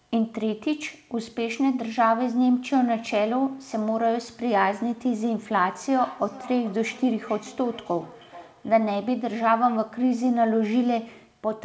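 Feedback echo between two devices, from 5.74 to 9.07 s: a second device replays the speech into a nearby microphone, returning it about every 0.4 s, thinner, at about −19 dB.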